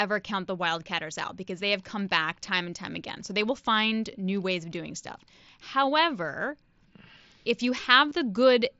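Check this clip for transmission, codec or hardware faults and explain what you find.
One fault turns up, near the very end of the speech. At 8.10 s, just after "if you", there is a brief buzzy, steady-level patch with a slight warble as the real signal resumes. This is concealed Bluetooth headset packet loss: about 22 ms of headset audio never reached the phone, and the receiver filled the gap by repeating the closest-matching piece of the preceding waveform. The link runs through the mSBC headset codec, whose wideband sound, with light graininess on loud sounds, can be heard throughout.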